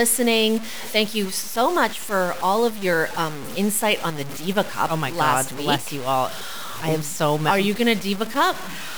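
From start to finish the speech sounds grainy and gritty, with quiet moments sputtering, likely low bit depth without dither, roughly five-bit truncation leaving noise only about 15 dB down.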